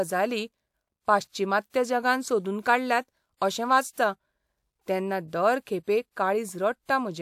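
Pre-echo at 3.37–3.41 s (after "पाश्चिमात्य जगान सोदून काडल्यात", before "अशें वाचता"), 5.28–5.33 s and 5.83–5.88 s (after "तेन्ना दर"): block-spread codec noise hisses 42–53 ms before attacks, seen as broadband smear preceding each onset.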